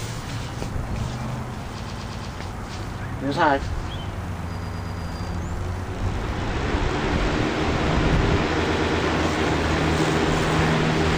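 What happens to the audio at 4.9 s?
At 4.9 s you're in the middle of a repeated-frames stutter, running from 4.56 to 5.03 s. A 116.1 ms block of compressed frames got written or sent again, so the decoder plays it four extra times. That adds 464.4 ms to the audio.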